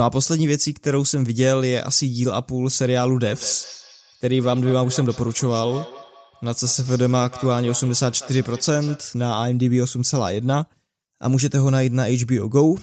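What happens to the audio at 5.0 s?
At 5.0 s the sound is inside a feedback echo between two devices, running from 3.25 to 9.16 s. Two devices sharing the room are on the same call, and one device's microphone picks up the other device's speaker output. Neither echo canceller removes sound it didn't play itself, so the audio keeps coming round at roughly a fifth of a second. The repeats peak at about 17 dB below the direct speech and sound thinner and more ringing with each pass.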